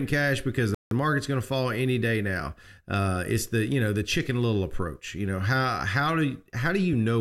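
At 0.75 s the speech halts and drops into silence until 0.91 s, a rebuffering stall. The player exhausted the audio it had downloaded and waited for more, adding about 167 ms of dead air. When sound returns it picks up precisely where it broke off, with nothing skipped. That clean resumption separates it from a dropout or packet loss, where part of the speech would vanish instead of simply being delayed.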